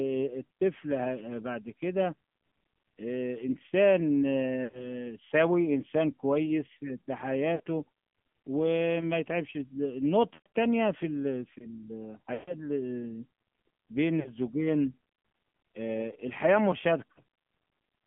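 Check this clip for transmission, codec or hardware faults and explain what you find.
The speech runs through an AMR narrowband mobile codec for its full length, and five short stretches are damaged by lost AMR speech frames.

The AMR narrowband mobile codec shapes everything. The line is confined to roughly 150 Hz to 3.4 kHz, consistent with AMR-NB at a low mode near 7.4 kbps. At that rate the few excitation pulses per subframe can't carry the voice's natural roughness, so it turns buzzy and synthetic. Plain band-limiting would only sound muffled. The codec's signature is that added artificial buzz.

Lost AMR speech frames occur at 4.64–5.04 s, 7.56–7.60 s, 10.34–10.46 s, 12.34–12.55 s and 17.12–17.20 s. When frames fail, the decoder keeps repeating the last good pitch and vocal-tract settings while lowering the gain. The two brief events, at 7.56 s and 17.12 s, each fit a couple of frames and come through as a quick warble or dip. 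The longer ones, at 4.64 s, 10.34 s and 12.34 s, sound stretched and then fade toward silence. Each time the voice returns weak or rough for a moment. An ordinary packet dropout would cut to silence or leave a click. Here the sound is smeared forward and fades gradually.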